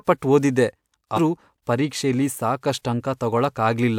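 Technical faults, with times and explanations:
1.15–1.19 s, compressed frames skipped: The speech suddenly jumps ahead by about a fifth of a second, which fits roughly five frames of 42.7 ms missing or rejected by the decoder.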